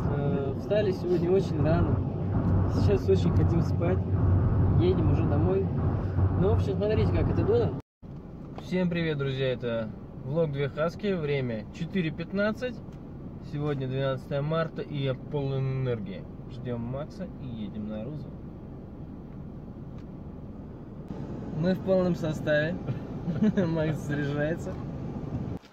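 At 7.30 to 7.98 s and 20.53 to 22.09 s the sound runs about 6% fast and a semitone sharp, and at 15.31 to 16.06 s it runs 6% slow and a semitone flat, then it snaps back each time. That's likely a drift correction step, with clock-matching software lurching the playback rate to rebalance its buffer.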